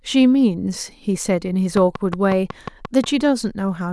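A train of clicks runs from 1.77 to 3.05 s, about seven evenly spaced pulses at 5.5 per second, likely from interference or a faulty connection or power supply injecting repeated impulses. Each ticks sharply over the speech, peaking around 10 dB above it.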